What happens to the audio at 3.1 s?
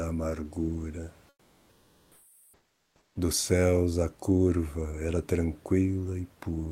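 At 3.1 s comfort noise in place of the background is just ending: from 1.29 to 3.15 s, the real room noise gives way to steady, featureless hiss about 3 dB quieter, likely from discontinuous transmission. Unlike a dropout, the pause never goes silent.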